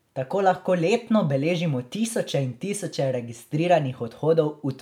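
No faults detected anywhere in the recording; the speech runs unbroken throughout.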